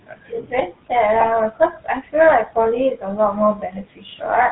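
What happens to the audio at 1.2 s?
From 1.20 to 1.27 s the sound breaks into a brief squawk and gargle from GSM bit errors. Flipped bits, at a rate of 2.65%, corrupted the decoder's filter, pitch and gain values, bending the spectrum and jolting the level. The roughly 70 ms span fits about three damaged frames.

Underneath, the GSM full-rate codec gives the sound a buzzy, gravelly texture with nothing above 4 kHz. This roughness is plainly audible and consistent with the 13 kbps full-rate coder, which rebuilds the signal from a vocal-tract model excited by coarse, regularly spaced pulses.

Noise suppressor artifacts also run through this moment. The suppressor attenuates bands it judges to be steady noise frame by frame, so the room noise, about 20 dB below the speech, dips and swells.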